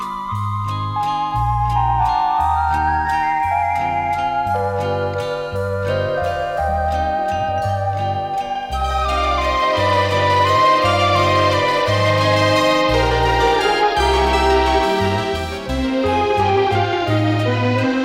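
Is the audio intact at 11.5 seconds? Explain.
Yes, at 11.5 seconds the audio is intact, with no dropout, click, distortion or other fault at that moment.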